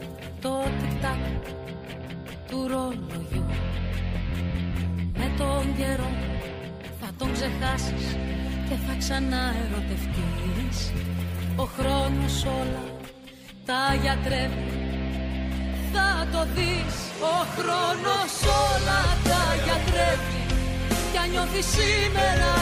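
No technical fault can be heard anywhere in the recording.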